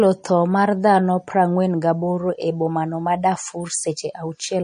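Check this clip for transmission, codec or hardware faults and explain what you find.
One codec problem runs through the whole clip, and it sounds like MP3 compression at a low bitrate. From start to finish there's nothing above about 10.1 kHz, so the top end is dull and the s sounds lose their edge. The speech has a watery, swirly texture, most likely because the encoder was starved of bits, which fits something around 40 kbps. It zeroes the weaker frequency lines, and they flicker on and off from frame to frame.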